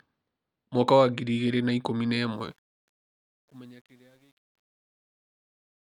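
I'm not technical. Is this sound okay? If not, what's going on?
No. Right after "igĩrĩ na ikũmi na", at 2.32 s, the speech fades out, and the fade suffers truncation distortion. From about 3.15 s to the end at 5.81 s, the tail turns gritty. A clean fade would simply grow quieter without that roughness.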